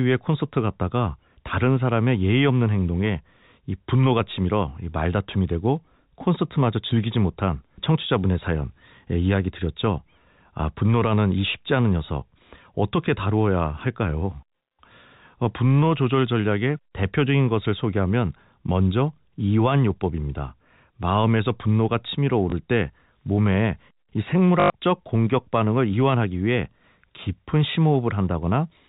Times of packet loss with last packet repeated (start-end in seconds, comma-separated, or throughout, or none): 22.50, 24.60-24.70